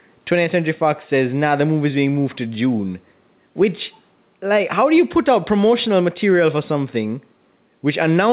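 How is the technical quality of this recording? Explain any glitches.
The speech has an audible level problem running through the whole clip, heard over the narrow, telephone-style bandwidth of the call path, with nothing above 4 kHz.

Gain pumping, throughout: the gain is pulled down by roughly 5 dB whenever the speech gets loud, so the level breathes and sounds squashed. The likely cause is microphone gain set far too high, with a fast limiter or compressor repeatedly pulling it back down.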